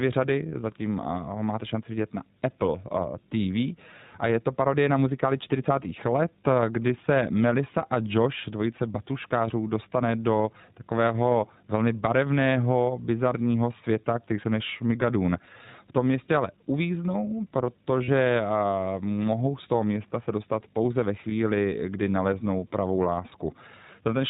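Throughout, the speech sounds narrowband, with nothing above 4 kHz, and plainly rough and slightly synthetic. That is the iLBC codec, which codes each frame's excitation independently. The character fits its 15.2 kbps mode with 20 ms frames.

At 18.04 s, and again at 21.30 s between "se dostat pouze ve" and "kdy naleznou pravou", a brief held, buzzy vowel replaces the speech for about 40 ms and then 20 ms. These are lost iLBC frames. The decoder repeated the last pitch cycle with added noise, and clean speech returns almost immediately.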